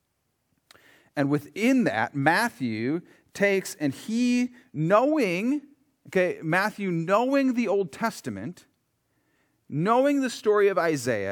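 Nothing in this recording stands out as a technical fault; the speech just carries on without any problem worth pointing to.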